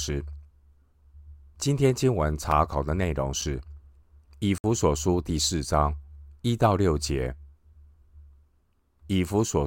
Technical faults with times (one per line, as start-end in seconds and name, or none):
2.51 block of digital silence
4.58-4.64 block of digital silence